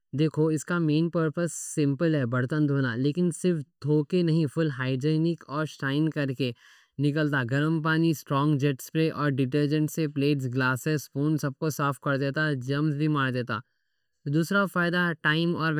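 From start to finish the speech has channel delay (comb filtering): one side runs late by somewhere under a millisecond, so the mono fold cancels evenly spaced frequencies starting around 700 Hz. You hear it as a hollow, phasey, slightly boxy tone that never shifts.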